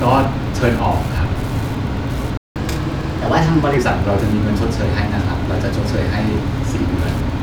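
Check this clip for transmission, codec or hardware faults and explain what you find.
Three faults are present: constant Wi-Fi interference, one playback stall, and a catch-up at higher speed right after it.

Wi-Fi interference runs through the whole clip. A nearby radio sends a beacon every 102.4 ms. The audio circuit rectifies each burst. The result is a steady ticking about ten times a second, sitting roughly 25 dB below the speech.

A playback stall occurs from 2.37 to 2.56 s. The speech cuts off mid-flow and stays silent for about 182 ms. The player most likely ran short of data, or its thread was blocked. Output simply stopped until it recovered.

Catch-up at higher speed follows from 2.56 to 3.77 s. The player works through its backlog by resampling at 1.15 times normal speed. Pitch rises by about two semitones, making the speech sound hurried and higher. Both then drop back to normal.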